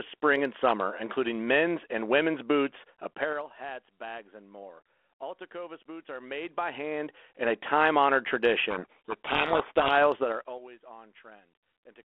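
From 3.07 to 3.50 s the level falls by roughly 20 dB in 4 dB jumps, about ten a second, with no smoothing, so each jump clicks. That zipper noise is a ticking over the speech. The waveform envelope shows a staircase, and the spectrogram shows thin vertical lines at each step.

From 8.70 to 10.02 s comes a codec payload misread. The decoder takes the G.726 code words in the wrong bit order and rebuilds the wrong sample differences, so the speech is buried in harsh distortion. The spectrogram fills with broadband hash inside the telephone band.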